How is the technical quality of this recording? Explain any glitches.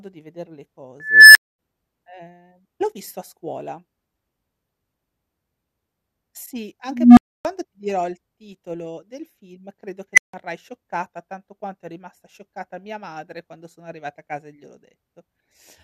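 Not great: there are three unstable filter blowups in the speech. A recursive filter runs away, swelling into a loud clipped tone before overflowing into silence. At 1.00 to 1.59 s, after "di vedere le", a tone of roughly 2 kHz builds over 350 ms and is followed by 240 ms of dropout before "ehm l'ho visto a". At 6.86 to 7.45 s, a low hum of roughly 200 Hz swells for 310 ms, then there's 280 ms of silence before "ti dirò il titolo". At 10.14 to 10.34 s, after "del film credo che", a quick squeal of roughly 2 kHz builds in just 38 ms and cuts out for 160 ms before "scioccata tanto quanto è".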